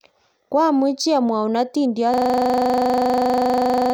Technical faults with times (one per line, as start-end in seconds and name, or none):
2.14-3.94 system hang loop